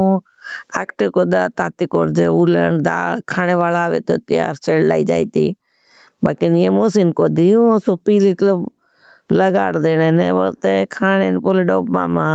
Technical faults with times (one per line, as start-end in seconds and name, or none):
0.00-12.35 gain pumping